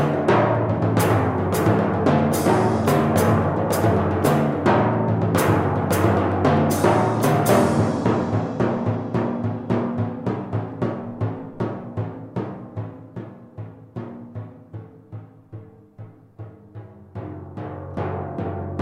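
No technical faults can be heard anywhere in this audio. There are no moments that call for a time mark.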